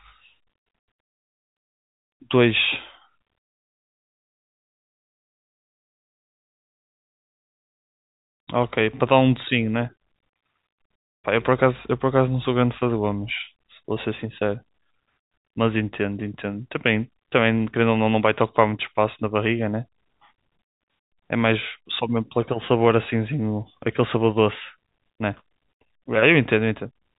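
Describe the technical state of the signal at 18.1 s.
At 18.1 s the speech comes through intact, with no dropout, click, distortion or other fault, only the narrow telephone band of the G.711 coding path it travels through.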